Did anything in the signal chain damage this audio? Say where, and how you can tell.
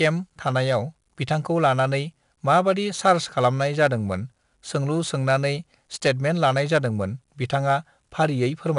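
Yes, at the codec. Coarse 4-bit ADPCM compression leaves gritty hiss riding every loud syllable. Nothing sounds above 10.6 kHz, which fits about 89 kbps.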